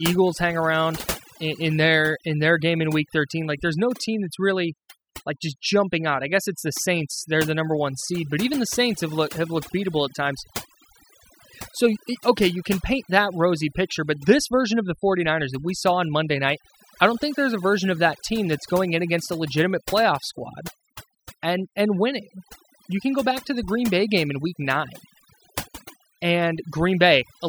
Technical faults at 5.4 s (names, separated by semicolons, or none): overdone noise removal